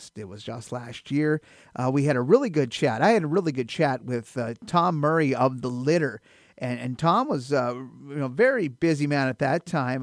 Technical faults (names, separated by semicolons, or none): none